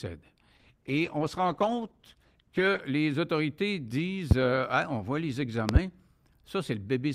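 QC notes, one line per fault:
0.56–2.89 s, call bitrate drop: the encoder's rate falls from 64 to 13 kbps for about 2.2 s, so the speech turns coarse, watery and dull, losing its top end.
4.31–4.34 s and 5.69–5.79 s, loud pop: likely a voltage transient; one sharp pop before "euh hein on voit", then a double pop after "hein on voit les", each around 20 dB above the speech.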